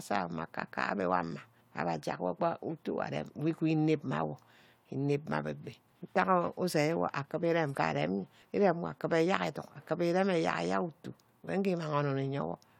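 No technical faults can be heard in the speech, and the signal stays steady and continuous throughout.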